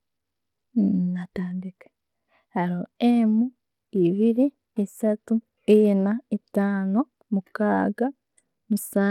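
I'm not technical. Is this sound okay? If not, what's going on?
No. Two faults run through this speech from start to finish.

The first is channel delay, which causes comb filtering. One side of the stereo sound arrives a tiny fraction of a millisecond later than the other. When the two sides are combined, some frequencies cancel out. The first gap sits up high, around 7 kHz. So the crisp top of the voice sounds thinned and hollow. It has a phasey edge that never goes away.

The second is a coarse, gritty quality, plainly audible across the whole clip. The highest sounds seem to flicker or drop out. A rough, grainy noise rides along with the voice. This points to Bluetooth SBC compression as the likely cause. That basic Bluetooth codec splits sound into a few broad bands. It gives the quiet upper bands too little detail, and it stores the rest coarsely, which roughens everything else too.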